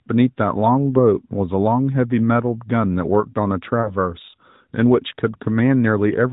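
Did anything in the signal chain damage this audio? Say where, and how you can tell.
Yes. Lost AMR speech frames over the radio link: the decoder concealed about 20 ms, likely a single frame, by repeating its last settings, leaving a brief dip or warble from 3.82 to 3.96 s.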